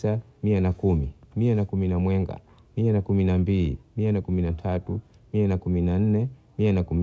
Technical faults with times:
none

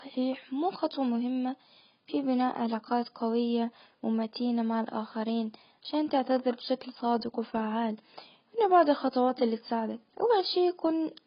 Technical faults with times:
0.00-11.26 AAC compression

